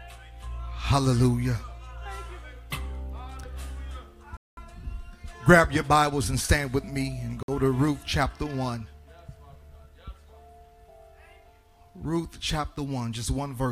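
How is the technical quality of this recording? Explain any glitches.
The audio drops out twice. At 4.37 s it cuts to silence for about 0.2 s, and at 7.43 s it goes quiet for about 54 ms. Both gaps are likely Bluetooth stalls, where interference delayed packets until the headphones' buffer ran dry.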